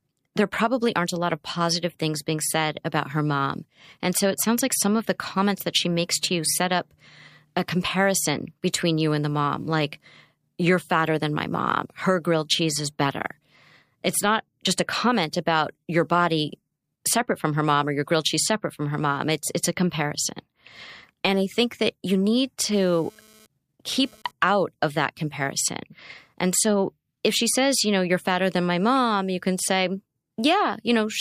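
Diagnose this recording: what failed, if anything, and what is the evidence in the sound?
The analogue side picked up GSM phone buzz. Right after "think that you need", from 22.72 to 24.31 s, a hard, raspy buzz sits about 30 dB under the speech, then clears before "out of that comparison". Its rate is 216.7 Hz with a dense stack of harmonics, and it has nothing to do with what's being said. A nearby 2G handset was bursting during a data transfer, and the audio circuitry rectified those radio pulses into audible buzz.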